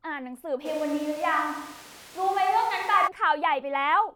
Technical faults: switch to a distant microphone

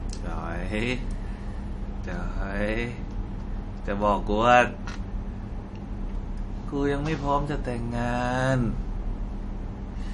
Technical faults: MP3 compression

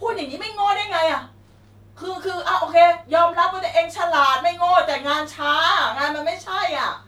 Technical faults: clock slip clicks

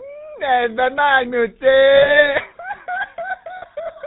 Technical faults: GSM full-rate codec; lost GSM frames

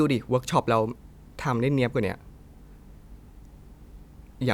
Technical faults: none

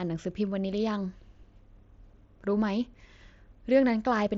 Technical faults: none

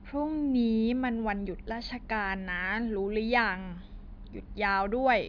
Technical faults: none

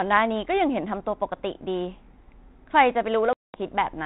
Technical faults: packet loss on an ADPCM call

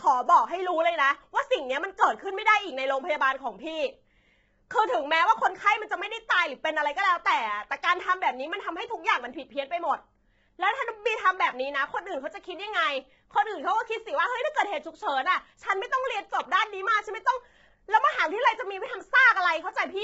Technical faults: low-delay AAC compression

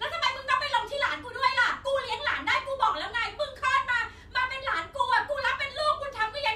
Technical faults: none

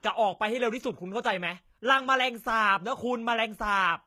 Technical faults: HE-AAC compression

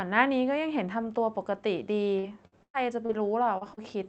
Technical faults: repeated packet loss (robotic sound); short concealed packet loss

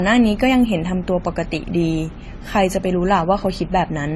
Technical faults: transcoding between lossy codecs

